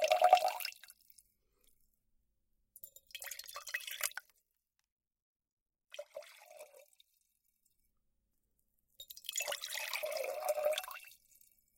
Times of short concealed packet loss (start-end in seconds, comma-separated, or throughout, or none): none